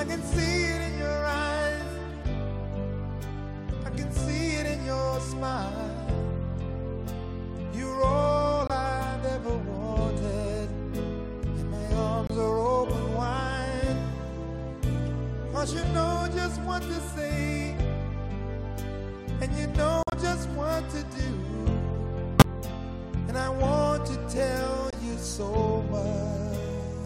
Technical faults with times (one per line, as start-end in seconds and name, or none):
8.67-8.71 corrupt frame muted
12.27-12.30 corrupt frame muted
20.03-20.14 corrupt frame muted
22.36-22.46 corrupt frame muted
24.90-24.94 corrupt frame muted